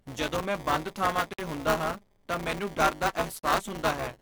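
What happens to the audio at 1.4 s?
Just before 1.4 s, the speech stops dead from 1.33 to 1.39 s. This is a gap at a join of encoded pieces: a silence of about 55 ms opens between "ਜਦੋਂ ਮੈਂ ਬੰਦ ਥਾਵਾਂ" and "ਹੁੰਦਾ ਹਾਂ ਤਾਂ ਮੈਨੂੰ", and the sound then carries on exactly where it left off. Two separately encoded pieces were butted together without trimming, so the first encoder's padded last frame and the second's start-up delay both survive as silence. Unlike a network dropout, which loses material, nothing is missing here. The codec smears the edges of the gap, so the truly silent part is shorter than the full span.

Across this moment the speech also carries buffer tearing, a steady robotic rattle at 200 Hz. The writing program and the hardware reading the ring buffer have slipped, so in each period roughly 15% of the buffer replays audio from about 10 ms earlier, with hard joins on both sides. 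The 200 Hz rate fits a 5 ms period. What separates it from codec warble is its fixed, mechanical rate and that it sounds only while signal is present, vanishing inside the silent gap.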